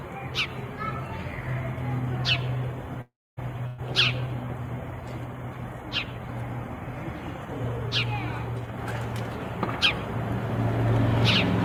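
At 3.01 s the audio stream was likely interrupted by a long network dropout, with roughly 360 ms failing to arrive before playback resumed at 3.40 s. The receiver covers the gap by extending the last sound it had, so a brief buzz or hiss trails on and fades, and then about 260 ms of near silence follows. When the audio returns it has jumped ahead, with the missing stretch simply gone.

A shorter burst of packet loss follows from 3.67 to 3.81 s, when about 120 ms of audio was lost or arrived too late to play. Here the concealment fills the whole gap, extending the preceding sound and turning it down as it goes, so it comes across as a held, dimming buzz or hiss rather than a silence. The audio then picks up again slightly further on, with that section skipped.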